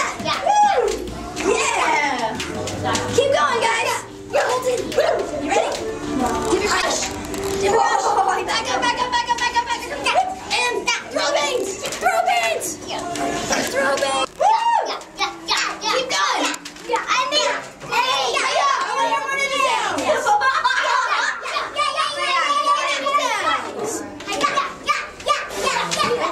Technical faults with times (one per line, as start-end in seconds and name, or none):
5.01-5.08 corrupt frame decoded
6.74-6.84 corrupt frame decoded
23.74-23.76 corrupt frame decoded